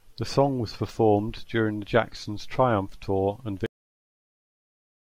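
The final stretch of the recording was never written out, so this speech clip has a cut-off end at 3.66 s. The last buffers of audio were simply lost before reaching the file or the output. The speech stops abruptly in mid-sound rather than finishing naturally. There is no decay or room tail, only an instant drop to digital silence, which then holds for the remaining second and a half.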